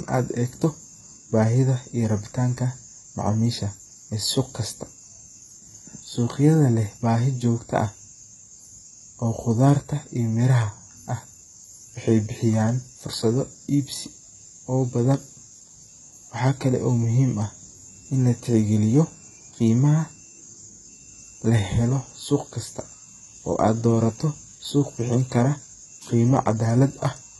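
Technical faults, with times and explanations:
Throughout: HE-AAC compression. Sibilants sound gritty, metallic and lispy, the treble synthetic and nothing above 11.8 kHz. This is likely heavy HE-AAC v2 coding, which fits about 16 kbps, where band replication copies lower bands upward and misaligns harmonics.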